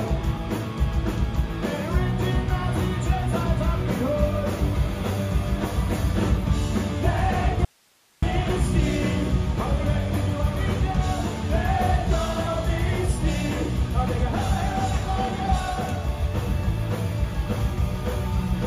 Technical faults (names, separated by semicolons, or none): audio dropout to a faint residue